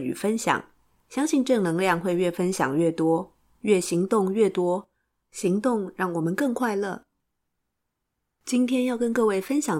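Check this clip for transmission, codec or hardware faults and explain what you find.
Nothing in this speech recording points to a fault.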